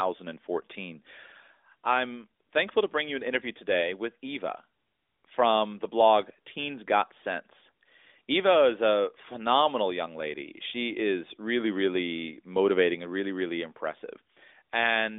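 Speech with no technical fault anywhere in the recording. It comes through an AMR narrowband mobile codec working as intended, at a rate that fits 12.2 kbps, so the sound sits in a telephone band of roughly 250 Hz to 3.6 kHz with nothing above about 3.7 kHz and only light coding texture.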